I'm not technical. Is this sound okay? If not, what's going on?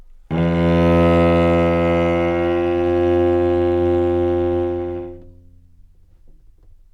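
Yes, there is nothing wrong to hear in this sound: no dropouts, glitches or other playback faults anywhere in it.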